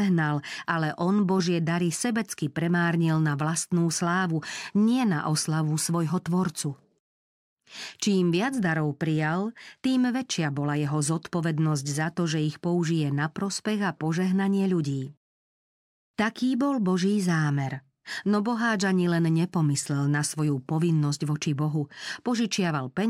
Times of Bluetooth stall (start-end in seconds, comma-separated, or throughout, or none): none